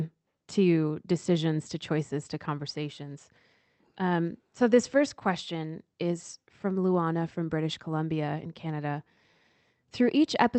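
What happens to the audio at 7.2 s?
At 7.2 s the speech carries on intact, with no dropout, glitch or other fault, just the steady band-limited character of the Opus call path at that point.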